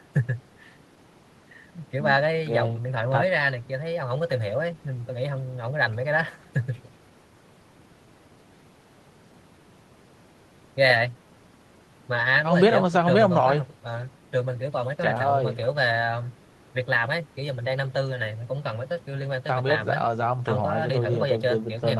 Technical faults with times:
none

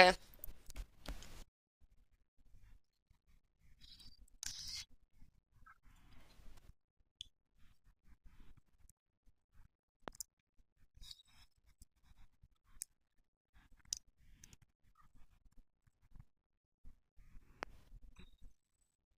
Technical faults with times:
1.09-1.11 loud pop
10.08-10.10 loud pop
17.63-17.65 loud pop

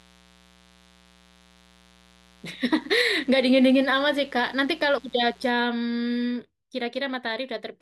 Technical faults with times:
0.00-5.47 mains buzz

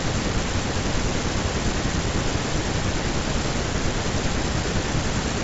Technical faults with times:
none

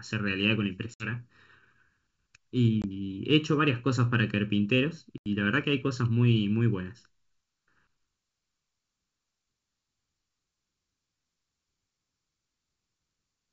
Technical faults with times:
0.00-13.53 channel delay (comb filtering)
0.94-1.08 packet loss on an ADPCM call
2.82-2.85 packet loss on an ADPCM call
5.18-5.28 packet loss on an ADPCM call

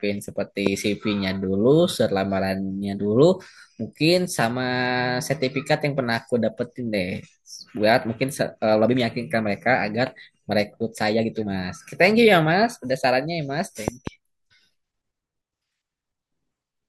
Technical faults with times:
0.67-0.69 loud pop
13.88-14.09 loud pop

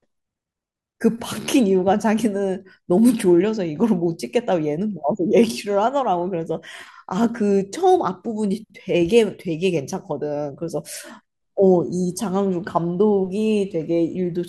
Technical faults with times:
11.63-14.35 mains buzz

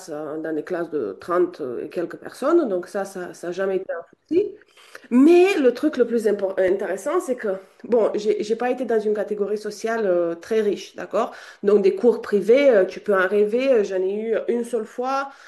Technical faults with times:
6.68 repeated buffer
12.93 repeated buffer

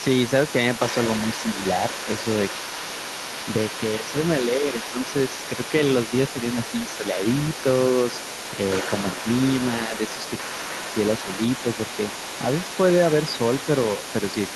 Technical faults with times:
0.00-14.56 other side's voice leaking through
2.62-2.95 speech suppressed in double talk
3.98-5.14 speech suppressed in double talk
9.84-9.94 speech suppressed in double talk
10.42-10.83 speech suppressed in double talk

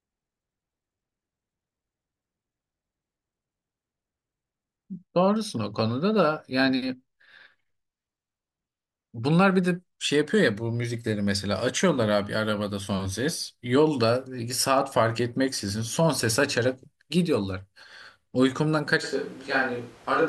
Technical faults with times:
19.05-20.29 switch to a distant microphone

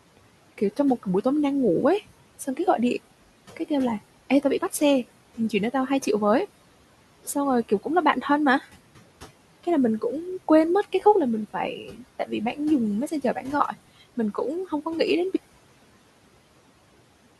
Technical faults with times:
0.00-17.40 noise suppressor artifacts
0.17-1.25 speech cut by the noise suppressor
2.39-3.70 speech cut by the noise suppressor
5.37-6.07 speech cut by the noise suppressor
7.23-8.67 speech cut by the noise suppressor
10.83-13.74 speech cut by the noise suppressor

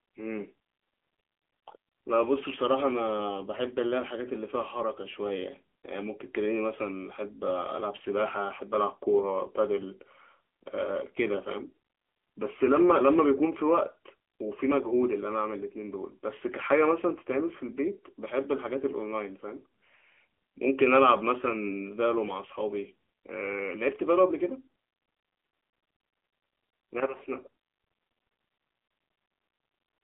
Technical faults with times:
0.00-30.04 AMR narrowband mobile codec

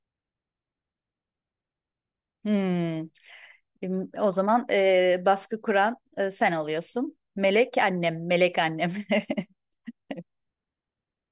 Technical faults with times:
none

